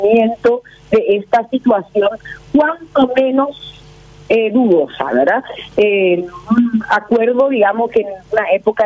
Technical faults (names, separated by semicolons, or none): gain pumping